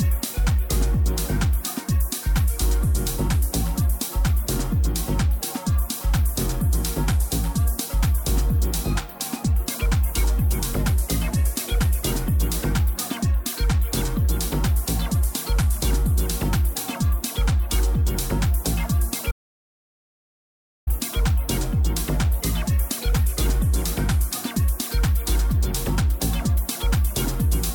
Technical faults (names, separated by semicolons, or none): audio dropout to silence